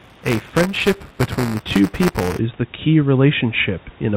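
Buffer tearing from 0.0 to 2.39 s, before "the key": writer and hardware reader cross inside each period, splicing in slivers of older audio, producing a robotic 200 Hz buzz.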